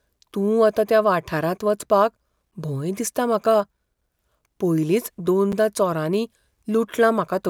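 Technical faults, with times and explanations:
2.51 s and 5.52 s, gap between chunks: The speech stops dead for about 7 ms at each point, first between "वता त्या वाठारांत वचपाक" and "भंय दिसता म्हाका". The two holes are exactly 3.0 s apart. That spacing points to audio delivered in 3-second chunks, with a sliver of silence inserted at each join. Nothing is missing from the speech. It is split, and each hole makes a brief break.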